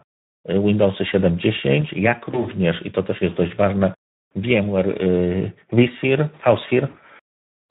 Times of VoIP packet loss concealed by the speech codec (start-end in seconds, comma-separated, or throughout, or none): 2.31-2.45, 6.89-6.99